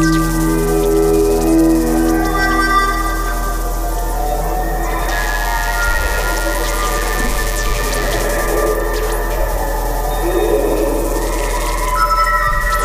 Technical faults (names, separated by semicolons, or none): DECT cordless phone buzz